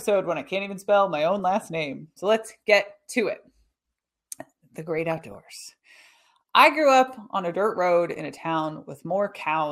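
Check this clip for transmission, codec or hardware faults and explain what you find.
The clip has DAB burbling in three places. The first is a brief burst at 1.39 s, between "even spell my own" and "last name". The second runs from 4.98 to 5.35 s. The third runs from 8.11 to 8.39 s, after "on a dirt road". Weak reception let bit errors, a few tenths of a percent, past the error correction. Corrupted samples put short blips of noise into single sub-bands. The result is burbling blips of noise over the speech.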